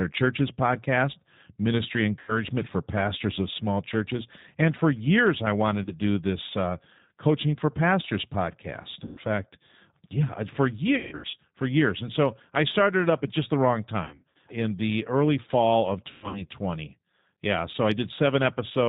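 The whole recording carries G.729 codec damage. It is plainly audible. The codec squeezes speech to 8 kbit/s. It keeps only a vocal tract filter, a pitch predictor and a few pulses per frame. Everything above 4 kHz is gone. The speech stays intelligible but sounds rough and slightly synthetic. Sibilants lose their edge.

VoIP packet loss concealed by the speech codec breaks in six times. The decoder guesses across each gap from its last pitch and filter, fading the gain as it goes. At 2.19 s about 90 ms is lost. At 5.84 s a single 30 ms gap follows. At 9.05 s about 120 ms goes missing. From 10.97 to 11.35 s losses scatter over 360 ms, with a 150 ms run. Between 14.05 and 14.36 s they scatter over 300 ms. From 16.11 to 16.44 s they spread over 240 ms, with a 120 ms run. Each gap is stretched into a buzzy tone or a coloured noise that fades. The speech stays weak briefly after each one.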